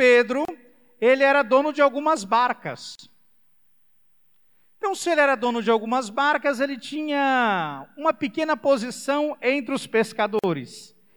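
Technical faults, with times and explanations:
0.45–10.44 s, gap at a join of encoded pieces: the speech drops to silence three times, at 0.45 s for 32 ms, at 2.95 s for 39 ms and at 10.39 s for 46 ms, then resumes exactly where it broke off. Each gap's edges are smeared by the codec, so the silent part is shorter. This fits separately encoded segments joined end to end without trimming, so each encoder's start-up delay and padded final frame stay in the stream as dead air.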